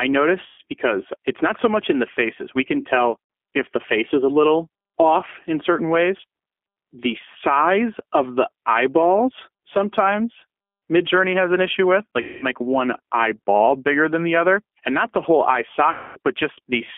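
Throughout, the speech sounds thin, slightly rough and synthetic, limited to roughly 250 Hz to 3.4 kHz: the G.729 codec at 8 kbit/s rebuilds it from a filter, pitch predictor and sparse pulses. At 0.46 to 0.60 s, 3.24 to 3.30 s, 12.21 to 12.47 s and 15.92 to 16.19 s, the sound smears into a fading buzzy tone or coloured noise. This is VoIP packet loss concealed by the speech codec, which extrapolates across gaps of about 120, 60, 210 and 240 ms.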